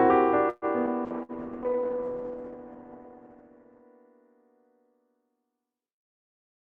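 From 0.49 to 0.65 s there is a call audio freeze. The sound stalls and is stretched into a fading buzz or hiss for about 126 ms. The likely cause is packets held up in transit until the jitter buffer ran dry. Playback then resumes exactly where it stopped, with nothing missing. On a spectrogram the last frame's harmonics smear horizontally and dim. The waveform shows a repeating, decaying pattern.

At 0.86 to 0.90 s comes a skip ahead. Roughly 70 ms of audio was discarded while later packets were already queued, so playback jumps forward with only a sliver of fill between. The waveform shows two unrelated segments butted together, and the spectrogram shows an abrupt vertical seam.

From 1.08 to 3.92 s a call bitrate drop sets in. A falling bandwidth estimate forced the encoder down hard, which fits a fall from around 48 to 12 kbps, held at its lowest for about 2.7 s. The sound turns muffled and rough. 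On a spectrogram the energy stops flatly at 8 kHz instead of reaching 20 kHz, and the detail below looks blocky and smeared.

Inside that stretch, at 1.23 to 1.32 s, a burst of packet loss removes about 60 ms. The receiver fills the hole with a continuation of the last sound that fades out, then picks up further on. The spectrogram shows a held, dimming band followed by a jump. In the waveform, the envelope tapers before a discontinuity.

From 1.63 to 2.05 s a jitter buffer slow-down stretches the audio. Repeated pitch periods add about 57 ms to build a reserve, so the audio plays at 88% speed with unchanged pitch. Harmonic spacing on the spectrogram stays constant while features lengthen. The waveform shows near-identical cycles recurring.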